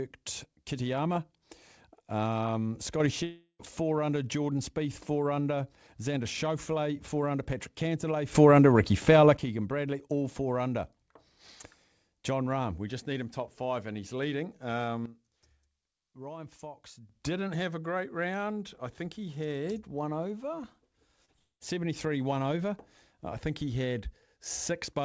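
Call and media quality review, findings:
Sudden gain jumps at 3.00 s (up about 6 dB, ~0.1 s), 8.35 s (up about 12 dB, ~1 s), and 15.06 s (down about 12 dB, ~2 s). Noise floor steps too, so likely an unramped digital gain change.

Long network dropouts at 3.24–3.61 s and 21.39–21.63 s. A fading buzz/hiss fill goes quiet, then audio resumes with roughly 0.36 s and 0.22 s missing. Likely the jitter buffer ran dry.

Short concealed packet loss at 21.25 s and 21.32 s, about 20 ms gone each. Brief smear where the decoder stretched the previous sound, right before the second dropout. Top end stops at 8 kHz, which fits G.722 at 64 kbps.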